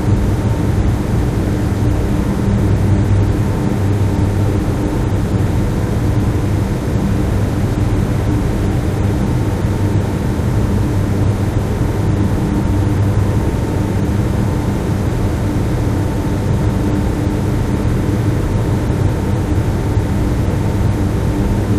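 Nothing here calls for comment, as the sounds in this recording come across without any technical faults to point out.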